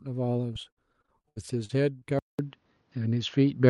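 From 0.53 to 2.03 s, repeated packet loss chops the speech. About a dozen short holes, up to 73 ms, are patched with stretched sound, giving a robotic tone.

At 2.19 s there is a 200 ms silence. The speech then turns duller, with nothing above 6.7 kHz and a level shift of about 5 dB, likely from an input switched to a poorer device.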